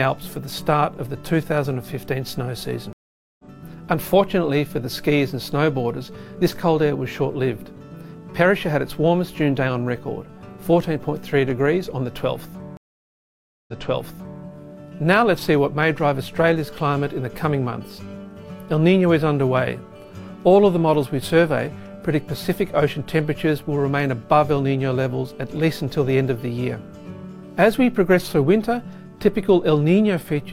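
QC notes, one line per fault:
2.93–3.45 s, stream reconnect: the connection drops and the audio goes silent for 460 ms, then a fresh decoder picks up roughly 300 ms further on, so a small chunk of material is simply skipped, as you'd get from a live feed carrying on without you.
12.77–14.42 s, stream reconnect: a longer 908 ms dropout, and this time it resumes 743 ms earlier, so you hear a stretch again where the server resent a burst on reconnecting.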